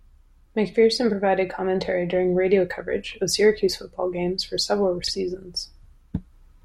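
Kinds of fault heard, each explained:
frames out of order: a brief garbled flutter after "football games for several", near 5.04 s, as two adjacent 32 ms blocks played swapped.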